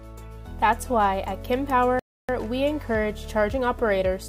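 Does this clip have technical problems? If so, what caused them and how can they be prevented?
Yes. A rebuffering stall runs from about 1.99 s to 2.29 s: the player ran out of downloaded audio, went silent, then picked up exactly where it had stopped, adding roughly 0.29 s without losing anything. On a waveform this appears as a flat, near-silent gap with sound on either side; a spectrogram shows a blank vertical band across all frequencies. A larger playback buffer and a steadier network connection would prevent it.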